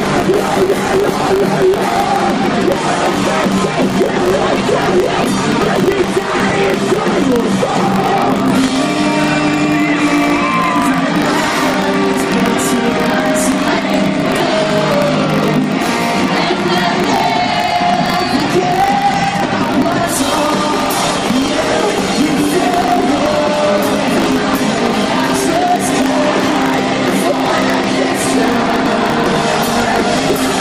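From 0 to 2.0 s the audio shows an adaptive stream starting at a low bitrate. The player opened on a cheap rendition so playback could begin quickly, then moved up once it had gauged the connection. The opening is dull, with a thin, synthetic-sounding top and heavier codec artefacts, which fits an HE-AAC version near 20 kbit/s. At 2.0 s the quality jumps without a gap to something closer to AAC-LC at 96 kbit/s.

Across the whole clip there is buffer tearing. The application filling the ring buffer and the hardware draining it have drifted, so their positions cross inside every period. Each buffer carries a small slice of stale audio, roughly 40 ms old, with hard edges on both sides. That produces a steady robotic buzz at 50 Hz, which fits a 20 ms buffer period. It rides on the signal and falls away when the sound stops.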